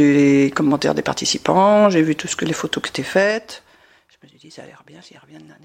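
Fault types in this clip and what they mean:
zipper noise: The gain falls in unsmoothed 2 dB steps, about fifteen a second, so the roughly 20 dB drop from 3.04 to 4.1 s ticks.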